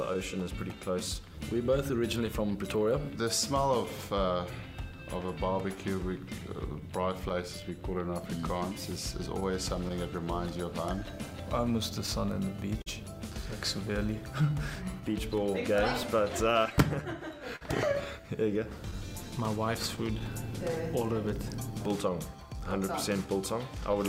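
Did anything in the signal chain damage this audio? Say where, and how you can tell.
Yes. The damage sits at the network and jitter-buffer stage. The first problem is clock drift between sender and receiver: the sending device's clock runs roughly 4 percent slow against the receiver's. The receiver's buffer keeps draining, so it has to stretch the audio to keep playing. On a waveform this shows as a steady shortfall of incoming material across the whole clip, with no single bad moment.

The repeated timing corrections are the receiver's response to that drift, running from 0.17 s to 23.72 s. It keeps repeating short slices, which plays the audio at about 97 percent speed and adds roughly 0.7 s in total. On a waveform the repeated slices appear as brief duplicated segments, irregularly spaced but all lengthening the signal.

Scattered short gaps come from late or lost packets, each patched by extending the preceding sound. 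There are about three very short ones (about 10 ms at most) between 2.26 s and 3.88 s, about five between 9.40 s and 12.88 s, and about ten between 16.03 s and 21.05 s. The longest in the later two spans is around 50 ms. A spectrogram shows them as thin smeared or frozen vertical strips.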